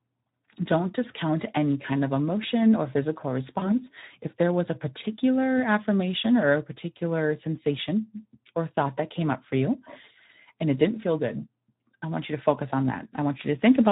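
Speech coded with the Speex codec throughout, at a rate that fits about 11 kbps. The excitation is starved of bits, so the voice sounds plainly hoarse and noisy. At 3.59 s, just after "of emotion or physical", VoIP packet loss concealed by the speech codec appears. About 20 ms of audio is lost. The decoder stretches the last sound into a fading buzzy tone or coloured noise, and it stays distorted until about 3.8 s.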